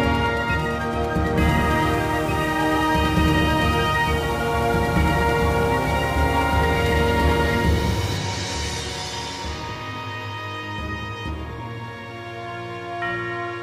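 From 1.38 s to 8.18 s a video or display buzz sits under the audio. A screen or its cable is coupling into the audio path, producing a harsh 60 Hz buzz at the picture's field rate with hash above it, roughly 15 dB below the programme.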